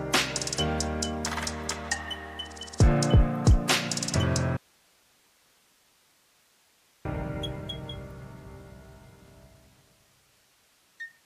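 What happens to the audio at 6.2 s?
At 6.2 s the audio is inside a dropout to a faint residue running from 4.57 to 7.05 s, about 2.48 s long. The wanted signal is lost, likely while the downstream path stayed live, leaving only hiss roughly 40 dB down. The cut and return are abrupt, unlike a fade or pause.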